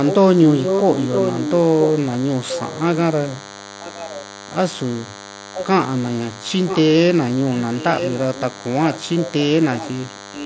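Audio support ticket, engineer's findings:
DECT cordless phone buzz, present throughout. DECT handset or base near the audio chain; its radio bursts every 10 ms are rectified by the analogue circuitry. Result: thin, steady 100 Hz buzz with a dense harmonic series, about 15 dB below the speech, continuous under and between phrases. Buzz harmonics sit within the 8 kHz band that fits the mSBC headset link.

Echo leak at 0.06–1.86 s, 2.48–4.25 s, 5.54–5.66 s, 6.67–6.82 s, and 7.58 s to end. Likely cause: far-end loudspeaker playback reaching the microphone, with the echo canceller failing to remove it all. Result: delayed copy of the speech trailing about 0.97 s behind. Strongest in the first stretch, at about 5 dB under the direct speech. Weakest at 2.48–4.25 s, about 15 dB down. About 10 dB down in the short scraps at 5.54 s and 6.67 s and across the final stretch.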